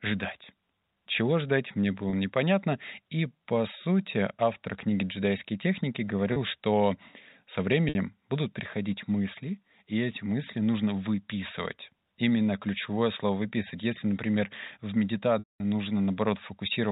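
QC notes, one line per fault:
2.10–2.13, 6.33–6.36, 7.89–7.95 s: packet loss with pitch repetition. Gaps of 30, 30 and 60 ms, which fits one, one and two 30 ms packets, are filled by repeating the last pitch period, so each sounds like a brief held, buzzy note.
15.39–15.60 s: packet loss with pitch repetition. A 210 ms gap, which points to about seven packets, outlasts the repetition. It fades to silence, and the signal returns through a short cross-fade. The band-limited telephone coding stays audible around it.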